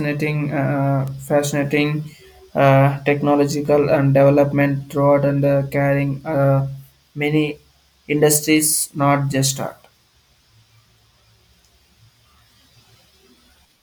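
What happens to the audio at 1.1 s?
At 1.08 s a bit error spike flips one sample to about -13 dBFS, a sharp tick: a lone vertical needle on the waveform, a thin full-band line on the spectrogram.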